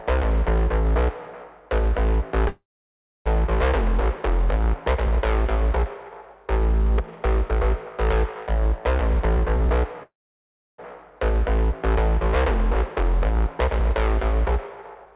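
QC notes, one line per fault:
2.48–3.28 s and 10.03–10.80 s, call audio freeze: the sound stalls into a short fading buzz, then about 0.63 s and 0.68 s of silence, and resumes exactly where it stopped, now running 0.78 s and 1.53 s late. The likely cause is a jitter buffer running dry. Unlike a dropout, nothing is lost, and the sound stays band-limited below 4 kHz throughout.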